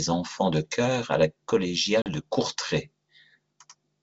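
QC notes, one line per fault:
2.02–2.07 s, packet loss on an ADPCM call: a hard-edged gap of 40 ms, consistent with a couple of lost packets filled with silence. The decoder's adaptive predictor and step size drift out of step with the sender's across the gap, so the sound re-enters with brief distortion. It settles within some tens of milliseconds as the two resynchronise, against the G.722 wideband background.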